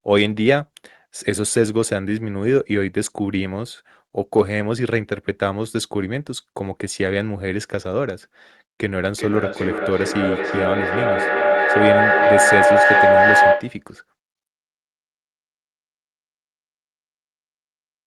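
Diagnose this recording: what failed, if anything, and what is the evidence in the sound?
The failure is a feedback echo between two devices, at the call-processing stage, from 8.97 s to 13.88 s. The sound returns at a steady interval of roughly 0.4 s, each pass thinner and more ringing. Instead of dying away, the repeats build until they peak about 6 dB above the direct speech. Two devices in the same room are on the call. One plays the other's audio, that microphone recaptures it, and neither echo canceller removes sound played by the other device.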